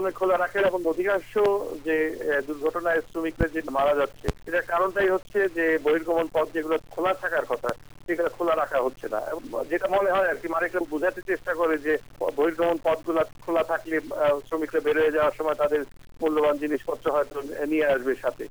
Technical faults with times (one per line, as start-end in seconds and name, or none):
0.00-18.50 low bit depth without dither